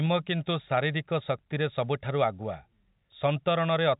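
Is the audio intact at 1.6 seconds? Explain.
Yes, at 1.6 seconds the audio is intact, with no dropout, click or other fault to be heard at that moment.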